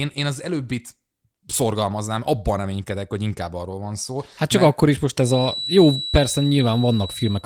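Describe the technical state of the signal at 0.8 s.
At 0.8 s the speech is intact, carried through the Opus voice compression with no fault audible at that moment.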